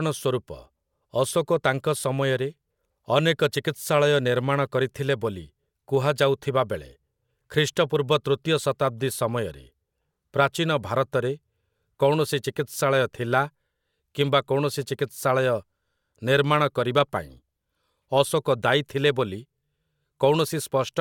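Speech recording with no technical faults to report.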